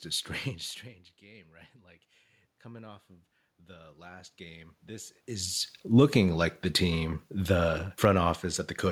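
Automatic gain rising runs from 1.20 to 6.43 s in this speech recording: after the input drops by about 21 dB, the gain control slowly adds about 10 dB, lifting voice and room noise together. Automatic gain falling follows from 6.81 to 8.19 s, when the control pulls back about 4 dB, so voice and background sink together.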